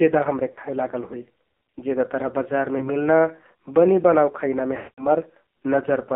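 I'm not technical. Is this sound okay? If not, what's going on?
No. This is speech that went through a mobile phone connection, and it has two problems.

The first runs the whole way through. It is the AMR narrowband mobile codec, the squeeze old 2G and 3G phones use to send a voice. This one was squeezed hard. Everything above about 3.7 kHz is gone, so the voice sounds thin and muffled. The heavy squeeze also makes it buzzy and a bit robotic. The phone rebuilds the voice from a rough model rather than sending the real sound.

The second problem is lost AMR speech frames. Small chunks of the signal never arrived, so the phone guessed by repeating the last sound it had, getting quieter. This happens at 0.52 to 0.59 seconds, as a brief wobble. It happens again at 2.78 to 2.90 seconds, as a quick dip. At 4.78 to 5.07 seconds the gap is longer. The sound drags out, fades toward silence, then comes back rough.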